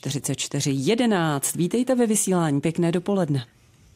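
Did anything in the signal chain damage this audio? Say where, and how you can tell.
No, nothing in this speech recording stood out on listening as damage from any stage of the signal chain.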